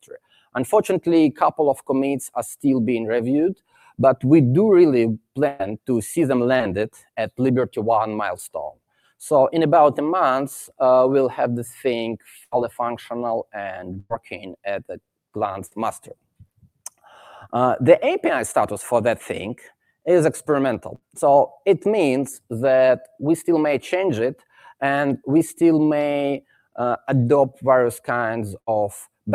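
Sound cut by the noise suppressor starts at 0.03 to 0.55 s and returns at 3.55 to 3.99 s. The suppressor mistakes wanted sound for noise and pulls it down by up to about 21 dB. Steady and fading parts sink, and tails end early.

A burst of packet loss follows at 5.47 to 5.61 s. About 120 ms never arrives. The receiver stretches the last sound into a fading buzz or hiss, then jumps ahead with that stretch missing.

At 6.57 to 6.62 s, short concealed packet loss drops about 20 ms. The gap is patched from the preceding sound and blended back. It is heard as a quick smear or wobble.

The suppressor cuts again at 6.93 to 7.08 s, by about 14 dB, and at 8.73 to 9.12 s, by about 21 dB.

More bursts of packet loss hit at 12.44 to 12.54 s and 14.00 to 14.12 s. The second has a brief true silence within it. Another lands at 15.66 to 15.73 s. Each loses 60 to 100 ms under a decaying fill.

Suppressor dips follow at 16.17 to 16.99 s, 24.35 to 24.61 s and 26.41 to 26.77 s, by about 14 to 21 dB. 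Between the first two of these, a burst at 20.95 to 21.04 s drops about 60 ms. A final burst at 28.60 to 28.69 s drops about 80 ms.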